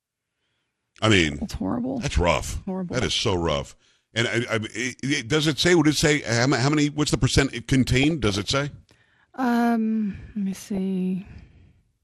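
Throughout the speech the sound is dull and plainly gurgling, with a grainy edge and the upper range missing or flickering in and out. This is MP2 compression, likely at a low rate around 80 kbps. MPEG Layer II divides the signal into 32 sub-bands and shares out a limited bit budget; starved of bits, the encoder drops upper bands and quantises the remaining ones coarsely.

From 1.14 to 1.45 s a burbling breaks over the speech. The same DAB burbling returns from 2.95 to 3.60 s, right after "rough horrible", then from 8.01 to 8.50 s after "the percent it", and from 10.52 to 10.78 s after "let me". Each burst sounds like blips of noise popping out of individual frequency bands. Weak reception let bit errors, at a fraction of a percent, slip through error correction, corrupting samples so short noise blips land in single sub-bands.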